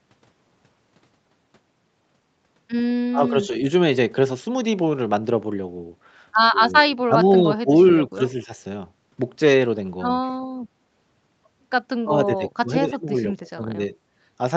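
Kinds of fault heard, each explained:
Speech suppressed in double talk: the speech ducks or breaks into pieces at 3.1 to 3.5, 6.6 to 7.7, 8.1 to 8.2, 8.4 to 8.5 and 12.0 to 13.8 s, dropping by roughly 10 to 25 dB. This is likely an echo canceller mistaking overlapping talk for echo and turning everything down.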